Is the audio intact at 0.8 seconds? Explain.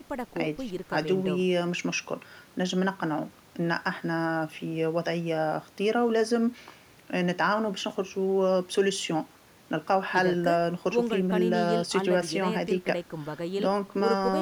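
Yes, at 0.8 seconds the speech plays through intact, with no dropout, click, distortion or other technical fault at that point.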